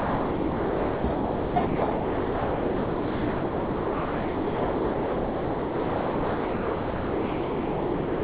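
From the start to 1.04 s the audio is replaced by a flat, steady hiss, and the same even noise takes over again from 1.14 to 1.56 s, from 1.66 to 1.82 s, and from 1.92 s to the end, a span of 6.32 s. Only brief 0.1 s glimpses of the real sound come through, all band-limited to nothing above 4 kHz. This is likely sound dropped by the voice detector: the sender judged the sound to be background and stopped transmitting, so the receiver filled the gaps with comfort noise.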